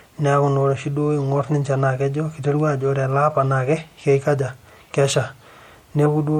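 Throughout, a starved perceptual encoder, likely MP3 compression at a rate fitting about 64 kbps, drops treble and weak detail, leaving the speech watery, swirly and smeared. At 6.05 s, compressed frames were skipped: about one 26.1 ms frame went missing, so the audio jumps ahead roughly 30 ms with a brief smeared blip.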